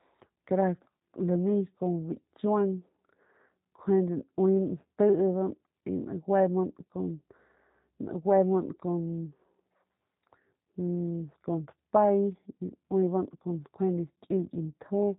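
Speech that carries G.729 codec damage, plainly audible, throughout. The speech is rebuilt from a vocal tract filter, pitch predictor and sparse pulses, which fits an 8 kbit/s G.729A stream, so it sounds rough and synthetic. A spectrogram shows everything above 4 kHz missing.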